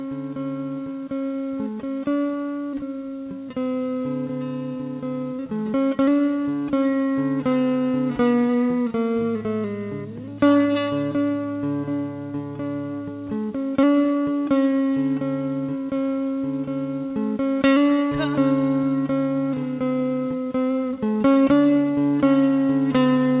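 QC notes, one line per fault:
No faults found.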